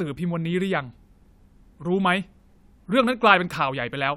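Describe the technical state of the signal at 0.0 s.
At 0.0 s the signal is intact, with no audible technical fault at that point.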